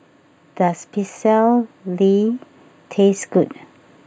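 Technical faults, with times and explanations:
Throughout: channel delay (comb filtering). The top end has a dulled, slightly phasey cast, as if something is scooped out up high. One channel trails the other by a tiny amount, roughly a tenth of a millisecond, which fits a delay of just a few samples. When the two are summed to mono, the shared content cancels at evenly spaced frequencies. The first notch falls around 5 kHz, so it mostly takes the sheen off the sibilance and air.
0.58 to 3.61 s: automatic gain rising. Across these three seconds the level creeps up by about 4 dB, and the speech and the background swell together. That's the giveaway: the gain control judged the input too quiet and eased its gain up gradually. Because it acts on the whole signal, the noise floor comes up right alongside the speech, so the change sounds like a slow fade-up rather than the talker leaning in.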